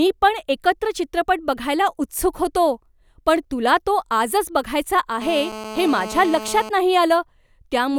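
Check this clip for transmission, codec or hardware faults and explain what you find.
One hardware fault stands out: GSM phone buzz from 5.22 to 6.69 s, starting right after "तुला तो आजच बघायचा". A 2G handset on a call nearby sends radio bursts about 217 times a second, and the audio circuitry rectifies them into a hard, raspy buzz about 12 dB below the speech. On a spectrogram it shows as a steady comb of lines at 217 Hz and its harmonics. The waveform carries a regular pulse train over the speech.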